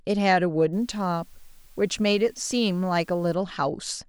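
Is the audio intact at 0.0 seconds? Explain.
Yes, the speech at 0.0 seconds plays through cleanly, with no dropout, click, distortion or other fault at that moment.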